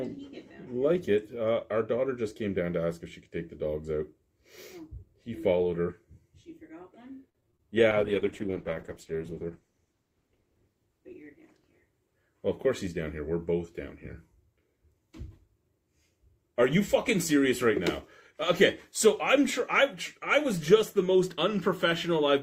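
Repeated packet loss (robotic sound) from 7.29 to 7.61 s: packets kept going missing, and each hole was patched by stretching the preceding sound. About a third of that span is filled in, with the longest gap about 52 ms, so the audio turns choppy, with pieces missing.

Call bitrate drop from 7.91 to 13.39 s: the bandwidth estimate fell and the encoder was forced to spend far fewer bits, which fits a fall from about 48 kbps to 11 kbps. The sound goes coarse, watery and dull, with its lowest quality held for about 2 seconds before recovering.

Jitter buffer speed-up from 11.62 to 12.15 s, inside the low-bitrate stretch: excess buffered audio was trimmed by cutting out short pitch-period pieces repeatedly, roughly 50 ms in total. Playback runs at about 109% speed with unchanged pitch, so this passage sounds hurried.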